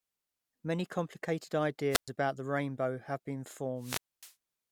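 At 1.9 to 2.09 s the speech gives way to a quick swell of hiss, then about 0.12 s of near silence; at 3.78 to 4.34 s the same happens with a 0.25 s hole. Both are wireless microphone squelch dropouts: the radio signal fades and the receiver mutes.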